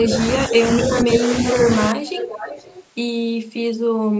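From 0.00 to 0.14 s, 0.46 to 0.64 s and 0.88 to 1.31 s, the speech dips by roughly 10 dB. This is likely speech suppressed in double talk. The canceller could not tell the talker from loudspeaker echo, so it turned everything down.

From 0.97 to 1.01 s, and again from 2.05 to 2.85 s, a copy of the speech returns about 0.52 s late. It sits about 10 dB below the speech. This is likely an echo leak. Residual loudspeaker sound escaped cancellation and was sent back.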